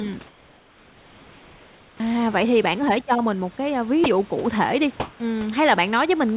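From 0.27 to 2.0 s the real background gives way to comfort noise, a steady, featureless hiss about 3 dB quieter than the room, likely because discontinuous transmission halted sending during the pause. At 1.97 to 2.0 s the onset is clipped by the voice detector, likely slow to react, so 30 ms of the attack is lost and the sound starts abruptly out of the synthetic noise. Between 4.04 and 4.06 s the voice detector drops sound, likely mistaking a quiet tail for background, and a brief patch of noise replaces about 10 ms of the signal. From 5.0 to 5.2 s comfort noise again stands in for the background, this time about 13 dB louder than the surrounding room tone, so it pops up as a short burst of flat noise. Through all of this, nothing above 4 kHz comes through, which fits narrowband G.711 at 64 kbps.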